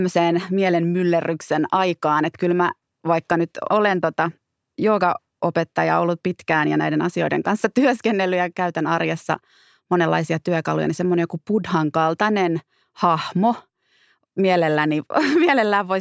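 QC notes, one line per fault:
No faults detected.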